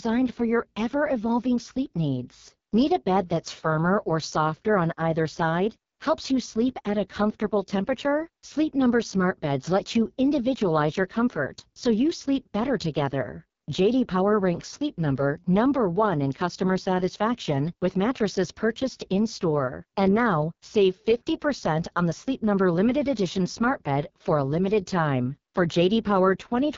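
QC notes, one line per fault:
Throughout: AMR wideband (HD Voice) codec, speech sounds rough and raspy with nothing above 7.1 kHz, which fits heavy coding at the lowest, 6.6 kbit/s, rate.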